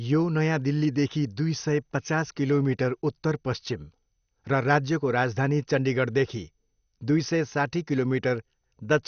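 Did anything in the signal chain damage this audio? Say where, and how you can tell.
Yes. The damage sits at the codec stage and runs through the whole speech clip: the sound is dull, with nothing above 6.5 kHz, and carries a plainly audible gurgling, granular roughness. That points to a low bitrate, about 48 kbps, which is likely MP2 compression. With too few bits, the upper sub-bands are switched off and the remaining ones are coarsely quantised. A simple low-pass filter would dull the sound without adding that grainy texture.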